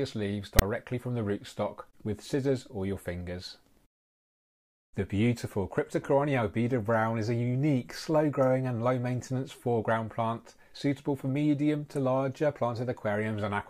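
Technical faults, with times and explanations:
0.59 to 0.62 s, file tags played as audio: for about 29 ms a block of text tags followed by zero padding is decoded as though it were samples. The character bytes come out as a harsh, loud rasp sitting off to one side of zero, then the padding drops to dead silence. On the waveform this shows as a hard-edged, DC-shifted slab ending in a flat line; the spectrogram shows a full-height broadband stripe with a blank gap after it.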